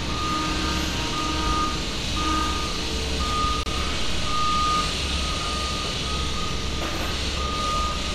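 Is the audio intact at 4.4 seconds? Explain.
Yes, the audio is intact at 4.4 seconds, with no fault present at that moment.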